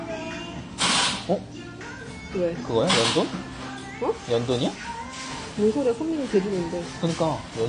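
From start to finish the audio carries plainly audible AAC compression damage, likely from AAC-LC coding at a low bitrate; the degree of smearing fits something around 32 kbps. Nothing is present above 9.8 kHz, where the encoder has lowered its cut-off to save bits, so the top end sounds dull and closed in. Within the remaining band, coarse quantisation leaves a smeared, warbling texture on sustained sounds and a fizzy edge on noisy, hissing components.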